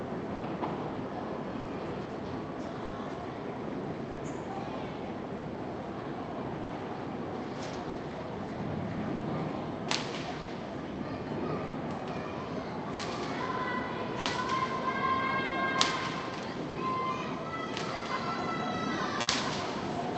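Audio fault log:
Throughout: clock drift between sender and receiver. The sending end's clock runs roughly 5% slow, so the jitter buffer keeps draining and has to stretch or repeat little bits to keep going. That shows up as small timing stumbles at uneven spacing across the whole clip.
0.35 to 19.29 s: scattered short gaps. Around fifteen packets went missing or arrived late, and each hole was patched by carrying the last bit of sound forward. Most patches are short, the longest around 70 ms, totalling about a second, so you hear brief smears and ticks against the Opus band's 8 kHz top end.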